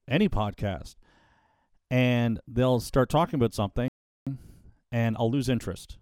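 Speech that goes silent at 3.88 s, just after "they'll start talking about", for about 380 ms: a playback stall, likely the player starving for data, unlike a dropout because the speech goes on where it stopped. From 4.27 s to the end, time-compressed catch-up runs the speech 1.1 times fast at unchanged pitch, which separates it from a sped-up resample.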